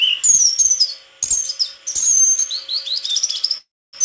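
At 1.99 to 2.04 s and 2.28 to 2.32 s, short stalls from a late packet occur: the jitter buffer emptied, so the last sound is held for 33 ms, then 19 ms, with a faint buzz or dip. From 3.58 to 3.95 s, a call audio freeze, likely from packets delayed in transit, extends the sound into a fading buzz or hiss, then 280 ms of silence before resuming unchanged.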